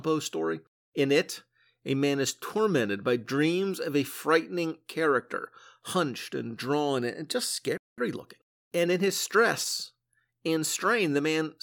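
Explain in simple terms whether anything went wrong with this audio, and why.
At 7.77 s, right after "and drawn and just", the speech cuts out for about 0.2 s. This is a playback stall, likely the player running short of data. From 7.98 s to 9.98 s, the speech comes out about 1.1 times faster, with normal pitch. This is time-compressed catch-up, as the player trims tiny pieces to recover lost time.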